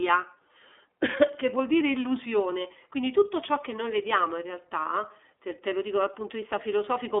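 The whole speech clip carries the iLBC codec. Nothing comes through above 3.8 kHz, and the thin 300 Hz to 3.6 kHz band, together with the audibly rough, synthetic texture, points to the 13.33 kbps mode with 30 ms frames, each coded independently.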